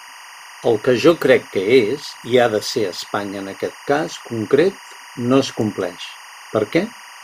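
A steady chirping warble runs behind the speech from start to finish, sitting about 20 dB below it and flipping between pitches around 1 kHz and 2 kHz. This is timecode bleed: 24-frame-per-second linear timecode leaking in from a neighbouring track or cable.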